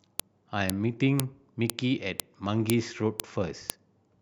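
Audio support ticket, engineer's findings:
Sharp clicks at 0.20, 0.70, 1.20, 1.70, 2.20, 2.70, 3.20 and 3.70 s, every 0.5 s. File header played as audio: stream joiner leaves WAV headers in, played as samples.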